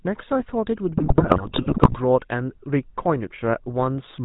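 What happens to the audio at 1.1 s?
At 1.1 s the GSM link is delivering corrupted data: GSM bit errors run from 0.96 s to 1.97 s. Flipped bits reach the speech decoder and scramble the values it uses to rebuild each frame, the vocal-tract filter shape, the pitch period and the gain. Frame by frame the spectrum warps and the level jumps, so for that second the speech breaks up into squawks, pops and a gargling texture, at a damage level that fits an error rate of roughly 4 to 5 percent.

Underneath, the whole clip passes through the GSM full-rate codec, which fits the 13 kbps first-generation GSM coder. It models the voice as a filter excited by regularly spaced pulses and keeps only a third of the excitation samples, discarding everything above 4 kHz. That leaves a plainly audible buzzy, gravelly roughness and a dull, band-limited top end, which the bit errors at 1.1 s break up further.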